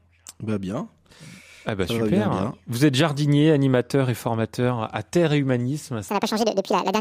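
Speech, with a section at the wrong speed from 6.09 s to the end at 7.00 s: playback runs 1.76 times too fast, so the sound turns hurried and jumps up by around ten semitones at once, likely from that segment being clocked at the wrong rate during editing or playback.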